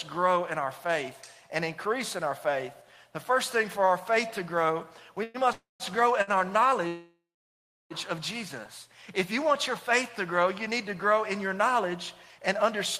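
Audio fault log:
5.23 to 5.37 s, call audio freeze. The last sound carries on as a fading buzz for 110 ms. The jitter buffer likely ran empty while packets were held up. Audio resumes where it stopped, so nothing is lost. Everything after arrives 110 ms later.
5.52 to 5.83 s, call audio freeze. A 275 ms gap opens. The buzz fades, then 160 ms of it is silent. The likely cause is delayed packets draining the jitter buffer. Playback picks up from the same point, adding 275 ms of delay.
6.22 to 6.30 s, short stall from a late packet. One packet was not there when it was due. The receiver held the last sound for 55 ms, giving a slight buzz. The audio then continues with nothing missing, just 55 ms later.
6.87 to 7.93 s, call audio freeze. This is the longest wait, at 1.03 s. The held sound fades out, and 680 ms of the gap is silence. Packets were likely stuck in transit. When they arrive, the audio resumes intact but 1.03 s behind.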